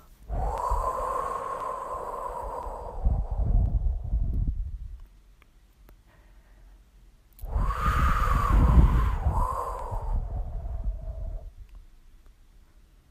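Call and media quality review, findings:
Periodic USB or driver dropouts: regular ticks every 1.02 s, 0.58 to 12.86 s, around fifteen. Bus or driver stalls skip roughly half a millisecond each time.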